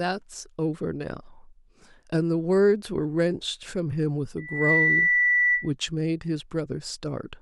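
Loudspeaker feedback squeal runs from 4.37 to 5.71 s. A microphone is picking up the loudspeaker it feeds, and at 2 kHz the round trip gives back more than it receives, so that single frequency keeps reinforcing itself. It is heard as a piercing 2 kHz tone that swells up in roughly a third of a second, then holds at a few decibels above the speech until it stops at 5.71 s.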